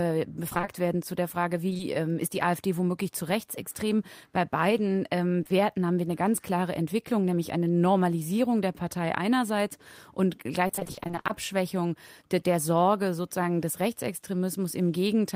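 From 0.49 to 0.69 s there is repeated packet loss, giving a robotic sound. The audio keeps dropping out in holes of about 20 ms, one after another. Each hole is bridged by extending the sound just before it, and about half of this short stretch is patched that way. The result is choppy, with small pieces missing.

Short concealed packet loss follows at 1.69, 1.73 and 1.77 s. Each event loses about 20 ms. The receiver fills each gap by continuing the preceding sound and then blends back into the real signal. Heard together, the three make a brief smear or wobble. The same short concealed packet loss returns at 5.43 and 5.47 s. It is a quick pair of brief smears, and any short consonant there can disappear.

From 10.67 to 11.31 s the repeated packet loss returns for longer. There is a dense run of roughly 20 ms holes, again with about half the stretch made up by extending the last sound. 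Over this longer span the choppy quality is sustained, with fragments of the audio missing throughout.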